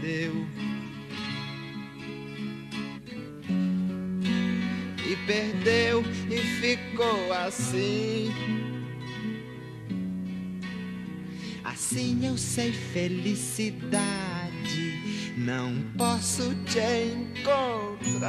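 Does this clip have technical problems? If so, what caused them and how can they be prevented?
No, this clip has no technical problems, so there is nothing to prevent.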